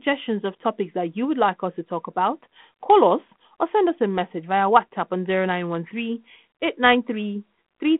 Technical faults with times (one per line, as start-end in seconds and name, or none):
none